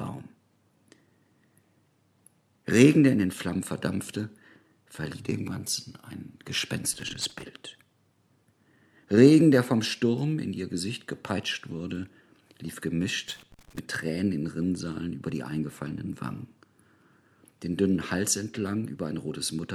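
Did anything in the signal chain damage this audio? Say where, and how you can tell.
Yes. Two short, irregular bursts of crackle and scratching break into the sound, from 6.93 to 7.45 s and again from 13.28 to 13.79 s, each about half a second long. This is loose connector crackle in the analogue wiring. A worn or dirty contact made and broke rapidly while being disturbed, chopping the signal on and off. Any DC on the line turned each break into a pop, giving the ragged texture.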